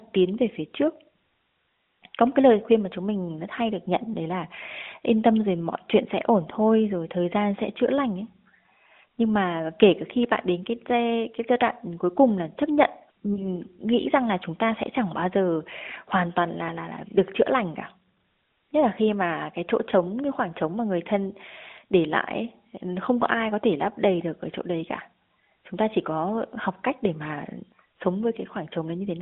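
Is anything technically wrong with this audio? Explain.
Yes. There are lost AMR speech frames at about 13.34 to 13.46 s, between "cùng là chấp nhận" and "nghĩ rằng là chúng". A radio error corrupted the data, so the decoder filled the gap by reusing the last good pitch and vocal-tract settings at reduced gain. The result is a brief dip or warble rather than true silence, which fits a single lost 20 ms frame. That distinguishes it from a hard dropout or a click. The surrounding audio passes through the AMR narrowband codec, with a band of about 250 Hz to 3.6 kHz.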